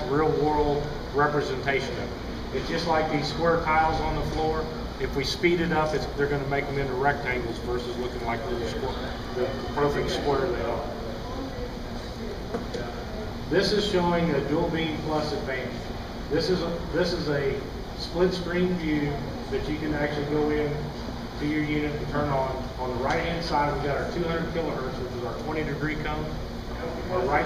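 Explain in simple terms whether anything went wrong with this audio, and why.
From 7.32 to 9.96 s there is a train of clicks: about fifteen evenly spaced pops, 5.7 per second, roughly as loud as the sound itself. Repeating pulses like this likely come from electrical interference or a faulty connection or power supply.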